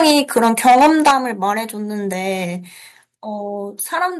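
From 0.0 s to 1.13 s the speech suffers microphone overload. The peaks have flat tops and a harsh, crackling edge, with roughly a tenth of the samples clipped and the input running about 11 dB past full scale. The likely cause is an input gain set high enough that the loudest parts exceed the converter's range, so their waveform tops are sheared off.

The microphone volume is stepped down twice during that stretch. At 0.11 s the level drops by about 3 dB, and the distortion continues. At 1.11 s a larger cut of about 9 dB follows, and the crackle stops at 1.13 s. Both drops hit voice and background together, as sudden steps instead of gradual fades. That points, likely, to the call software detecting clipping and lowering the device's input gain in two increments.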